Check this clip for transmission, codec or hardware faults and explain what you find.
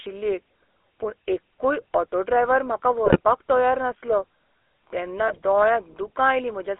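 Two faults show up here, both typical of a GSM phone call.

The whole clip has the GSM full-rate codec sound. The speech is squeezed into a 300 Hz to 3.4 kHz line band and rebuilt from a vocal-tract model driven by coarse, regularly spaced pulses, which fits the old 13 kbps full-rate coder. You can plainly hear it as a buzzy, gravelly roughness on the voice.

GSM bit errors hit at 3.06 to 3.2 s, between "एक्कूय ऑटो ड्रायव्हर म्हाका" and "तयार नासलो", and again at 5.28 to 5.38 s. Corrupted bits reach the decoder, so the filter, pitch or gain values for a few frames come out wrong. The voice briefly breaks into squawky, gargling bursts.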